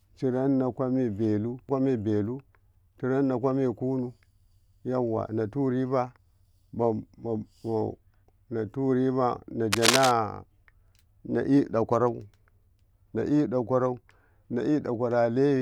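A speech recording carries a burst of cable scratch noise from 9.72 to 10.11 s, a dense, uneven rustling roughly as loud as the speech, likely from a worn connector being moved. Unlike isolated clicks or crackle, it forms dense, uneven bursts of scratchy texture.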